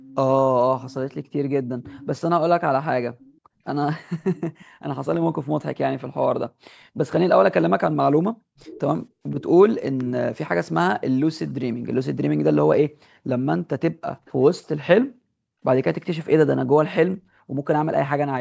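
A loudspeaker-side echo canceller likely failed to remove everything its microphone picked up, causing echo leak: a faint copy of the speech returns about 480 to 500 ms late, roughly 20 to 35 dB below the voice, at 0.0, 0.8, 1.84, 3.19, 4.36, 8.57 and 14.25 s.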